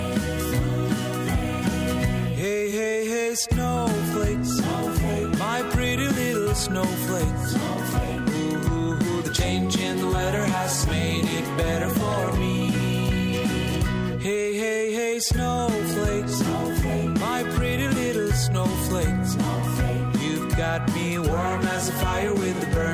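No technical faults can be heard anywhere in the recording.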